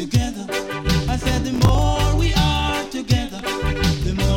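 From 1.54 to 1.79 s, processor overload crackle: roughly a dozen or more short buffers miss their deadline and replay stale audio, giving a gritty tearing burst rather than one isolated click.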